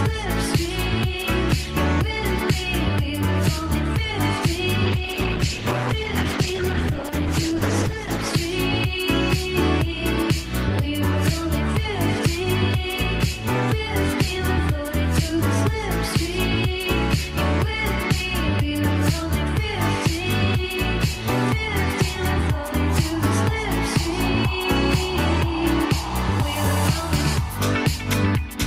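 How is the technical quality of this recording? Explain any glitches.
The quality is compromised by one call bitrate drop. From 4.87 to 8.39 s the audio turns rough and muffled, losing its high frequencies. It stays degraded for about 3.5 s, which fits the encoder's rate falling from about 40 to 11 kbps. Coarser coding and a narrowed band cause this.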